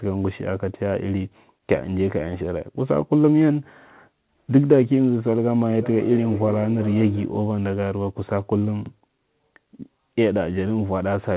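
From 5.69 to 7.48 s there is feedback echo between two devices. A second device's loudspeaker is picked up by a microphone whose echo canceller only removes its own playback, so the sound returns roughly every 0.4 s, peaking about 13 dB below the speech. A spectrogram shows faint, evenly spaced copies trailing each syllable.

At 8.86 to 8.90 s, overlapping chunks replay 44 ms of audio. One processing block began before the previous one ended, which fits 5-second chunks, and the result is a brief stutter. The waveform shows the same short segment twice, with a step at the join.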